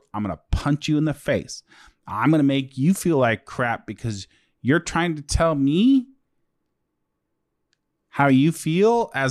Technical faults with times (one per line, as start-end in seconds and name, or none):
none